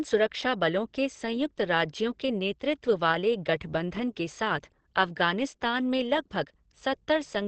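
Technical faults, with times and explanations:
Throughout, Opus compression: speech sounds muffled and hoarse with nothing above 8.5 kHz, likely a low-rate encoder in its speech mode squeezing everything into wideband.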